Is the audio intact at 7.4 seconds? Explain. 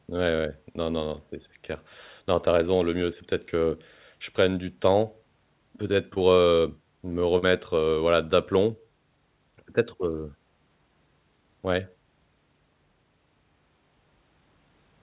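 No. From 7.38 to 7.44 s there is a brief smear where the sound stops moving naturally, a small wobble before the real audio returns. This is short concealed packet loss: about 40 ms of the call never reached the decoder in time, and the receiver filled that gap by extending the preceding sound, then blended back into what arrived. The narrow bandwidth, with nothing above 4 kHz, fits the G.711 call codec.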